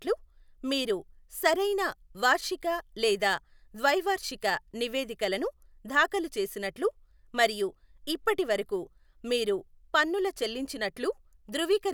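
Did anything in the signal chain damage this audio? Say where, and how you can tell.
No, no damage is audible.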